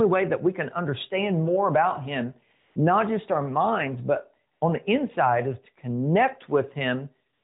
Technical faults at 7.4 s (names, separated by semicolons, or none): AMR comfort noise